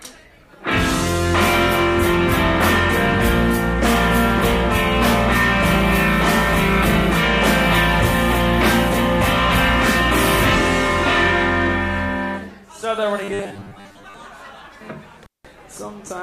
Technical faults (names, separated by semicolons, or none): robotic sound from repeated short buffers; intermittent contact